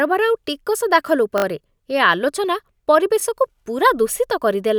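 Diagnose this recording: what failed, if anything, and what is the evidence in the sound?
Hard-joined stutters at 1.38–1.44 s and 3.20–3.22 s: a repeated buffer at the driver stage, where late audio forced replays of what fits a 20 ms buffer.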